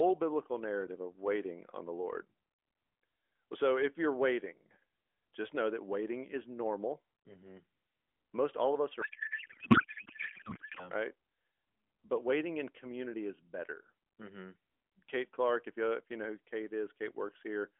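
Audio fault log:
9.02–10.89 s, codec payload misread: after "all of us", speech becomes garbled warble that barely tracks it, as octet-aligned AMR frames are read as bandwidth-efficient. Unlike dropouts, sound keeps flowing.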